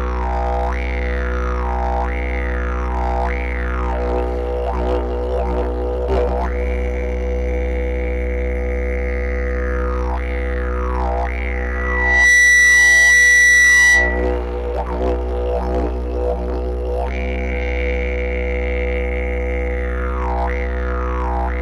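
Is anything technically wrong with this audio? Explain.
Yes. From 11.6 to 14.37 s a steady 2 kHz tone swells over about 0.7 s into a piercing squeal, well above the surrounding sound. This is loudspeaker feedback squeal: the microphone picks up its own loudspeaker, and at 2 kHz the loop gain exceeds one, so that tone keeps reinforcing itself.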